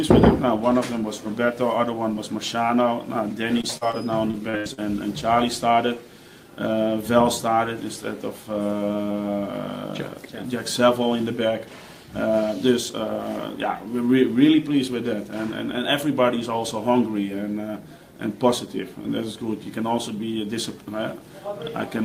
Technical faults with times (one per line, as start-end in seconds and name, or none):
3.61-3.95 short concealed packet loss
4.31-4.79 repeated packet loss (robotic sound)